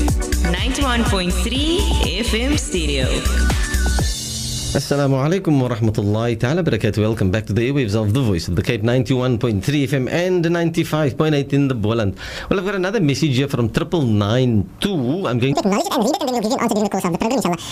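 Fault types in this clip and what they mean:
Audio read two samples at a time (double speed): The reader treats each pair of samples as one frame. The sound is consumed twice as fast. From 15.53 s to 17.72 s it plays at double speed, pitched an octave, 12 semitones, higher.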